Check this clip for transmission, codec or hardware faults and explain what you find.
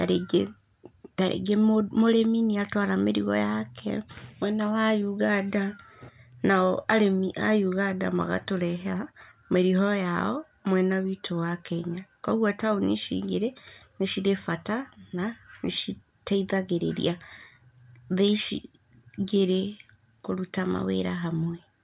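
Nothing in this speech recording sounds faulty.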